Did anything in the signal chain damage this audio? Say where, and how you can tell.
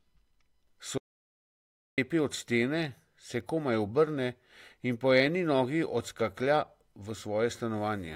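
Yes. An audio dropout to silence runs from 0.98 s to 1.98 s, about one second of speech lost, with the speech resuming at "od stene se komaj". The gap is silent with no room tone, a flat line on the waveform and an empty black band on the spectrogram. The likely cause is the input dropping out upstream, at the device or link, while the recorder kept writing silence.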